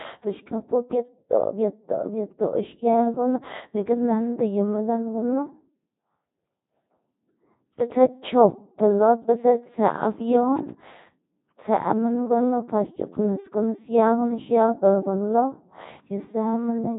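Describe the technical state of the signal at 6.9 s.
At 6.9 s the speech sounds robotic and buzzy with nothing above 3.8 kHz, as it does throughout: Codec 2 vocoder damage, resynthesised from sine waves, suggesting roughly 2.4 kbit/s.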